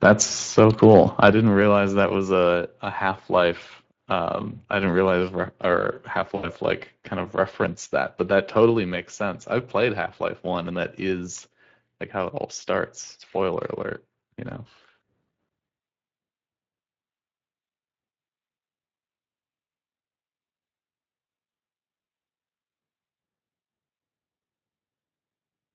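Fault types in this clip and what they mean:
Speex codec: The speech runs through a Speex CELP encoder at about 20 kbps, too little for clean excitation coding. The voice comes out plainly hoarse and grainy throughout, with a noisy, synthetic edge.
Microphone overload: The input gain was likely set too high, driving peaks about 4 to 5 dB beyond the converter's ceiling. The loudest moments, from 0.04 to 0.11 s and from 0.58 to 1.28 s, have their tops flattened, giving a harsh, crackly bite.
Microphone volume stepped down: The software likely reacted to the hot input by cutting the device gain in single jumps. The voice and background together drop abruptly, by about 7 dB at 1.32 s just after the distorted opening, and by about 3 dB at 8.7 s.
VoIP packet loss concealed by the speech codec: About 80 ms of the stream went missing, consistent with four lost 20 ms frames, and the decoder extrapolated from its last state. 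From 6.35 to 6.48 s the voice smears into a fading buzzy tone or coloured noise before recovering.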